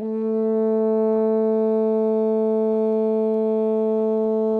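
From 0.43 s to the end, faint regular ticks recur roughly every 0.4 s: clock slip clicks, likely from unsynchronised clocks about 50 ppm apart dropping or repeating single samples.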